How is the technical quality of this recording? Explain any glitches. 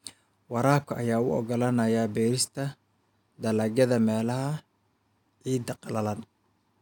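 The speech signal shows no technical glitches: nothing interrupts, distorts or disturbs the audio at any point.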